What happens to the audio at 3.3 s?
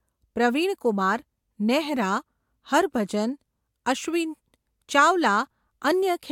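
Nothing goes wrong at 3.3 s: the speech carries on intact through that moment, with no dropout, click or distortion.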